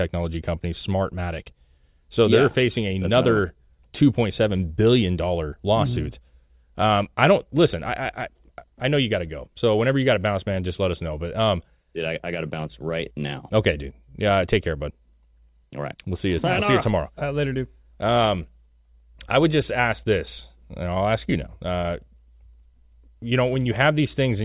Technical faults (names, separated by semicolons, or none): none